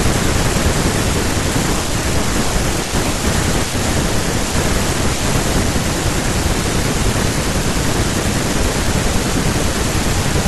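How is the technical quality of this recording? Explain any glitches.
The technical quality of this recording is good, with no glitches to explain.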